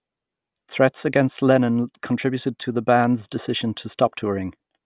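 No technical faults can be heard anywhere in the speech recording; the signal holds steady without any audible disruption or damage.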